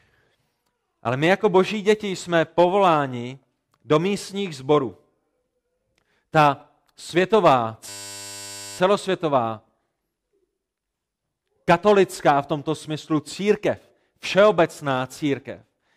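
A system hang loop interrupts this speech clip from 7.89 to 8.78 s, where one 10 ms slice of audio repeats exactly and produces a steady 100 Hz buzz. The computer or driver stalled while the sound hardware kept cycling through the same short ring buffer.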